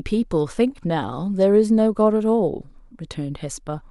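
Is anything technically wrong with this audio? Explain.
No, the speech signal comes through intact, with nothing in it that points to a technical problem.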